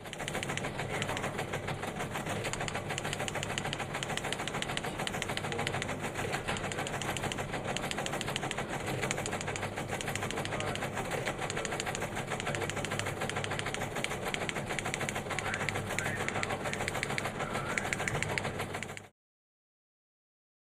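No technical faults are audible anywhere in the audio.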